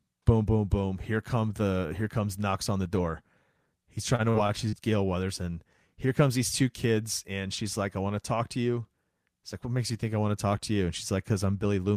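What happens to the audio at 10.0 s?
Nothing goes wrong at 10.0 s; the speech carries on intact through that moment.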